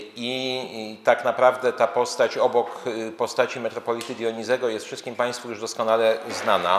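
No technical faults are audible.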